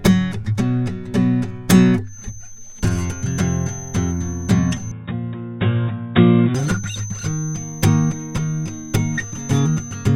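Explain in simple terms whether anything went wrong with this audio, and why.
Two things went wrong. The first is a feedback whistle: most likely, sound from a loudspeaker was reaching the microphone and looping round, sitting just at the edge of runaway feedback. From 2.03 s to the end, a thin, steady whistle at about 6.2 kHz sits behind the music, well below it in loudness, wavering slightly but never growing into a howl.

The second is an input switched to a poorer device: the recording likely changed over, mid-stream, to a lesser microphone or a headset's call mode. From 4.91 s to 6.55 s the music loses everything above about 3.8 kHz, so it sounds duller and more boxed-in, then clears again. The switch happens without any gap or jump in loudness, and the new device adds only a very faint background noise.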